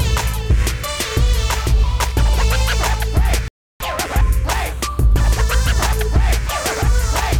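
At 3.48 s the audio cuts out abruptly in mid-flow and stays silent until 3.80 s, a gap of about 0.32 s, before the sound picks up again. This is a playback stall: the output simply stops rather than fading or glitching, which points to the player likely running short of data or having its playback thread blocked, so nothing reached the output until it recovered. To the ear it is a clean, noticeable hole in the sound.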